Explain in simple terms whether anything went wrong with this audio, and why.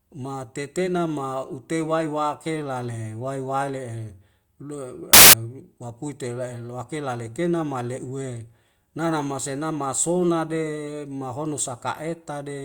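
Something did go wrong, briefly: from 5.13 to 5.33 s the speech is swallowed by a burst of harsh hiss, about a fifth of a second long. That's samples built from the wrong bytes. The player glued each sample's bytes together in the wrong order or offset, so the tiny, jittery detail ended up driving the loudness. Out comes loud, harsh broadband noise.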